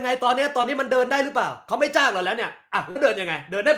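Short concealed packet loss occurs twice: about 20 ms of the speech missed the decoder at 0.61 to 0.65 s, and about 40 ms at 2.91 to 2.97 s. The receiver extended the preceding sound and blended back, leaving a brief smear or wobble each time.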